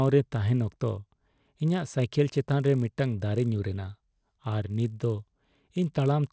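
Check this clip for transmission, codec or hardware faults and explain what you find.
A steady 50 Hz buzz rides under the speech from start to finish, present only while there is signal and gone in the pauses. This comes from a resampler restarted on every block: each 20 ms block was converted separately, likely from 24 kHz to 16 kHz, so every block edge carries a small error.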